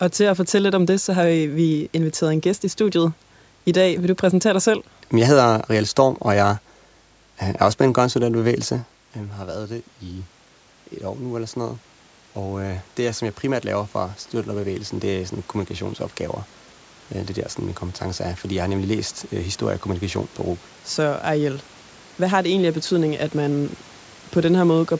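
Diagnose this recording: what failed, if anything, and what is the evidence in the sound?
Automatic gain rising in the call processing stage: around 8.5 s the talker moves back and the level drops, then after "en bevægelse", from 9.15 to 16.07 s, the AGC slowly adds about 8 dB, lifting voice and room noise together against an input about 12 dB quieter.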